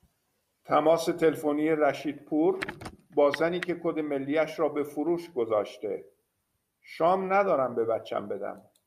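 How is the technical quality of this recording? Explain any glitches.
The recording has no technical faults or glitches. The speech runs without interruption, and there is nothing to explain.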